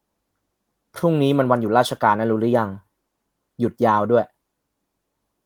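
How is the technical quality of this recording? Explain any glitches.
No glitches are audible: the speech keeps a steady, full-bandwidth sound, with only the light, even texture of Opus voice compression working as intended.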